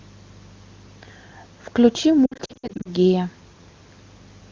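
From 2.25 to 2.90 s, lost AMR speech frames scatter brief warbles and dips, runs no longer than 60 ms, as the AMR-WB decoder repeats stale parameters with falling gain. This gives smeared fades rather than clean silent gaps.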